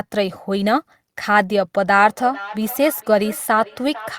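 From 1.93 s to the end, feedback echo between two devices: a second device in the room replays the call and its microphone sends it back, beyond reach of either echo canceller. Unlike diffuse room reverberation, each word returns as a distinct, thinner, ringing copy about half a second later, at about 16 dB below the speech.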